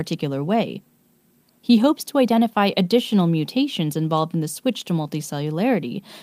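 Speech in the recording carries no audible technical fault anywhere in the signal.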